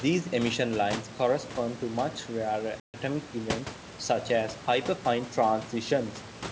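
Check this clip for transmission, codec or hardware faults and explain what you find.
One transmission fault stands out in this speech clip: packet loss on an ADPCM call. From 2.80 to 2.96 s the speech drops into a hard-edged silence about 140 ms long, roughly seven packets' worth. The missing audio was filled with nothing, and the decoder's adaptive predictor and step size drifted away from the sender's. When speech resumes it comes back slightly distorted, settling within some tens of milliseconds. That uneven recovery separates it from a plain dropout, where sound would return cleanly.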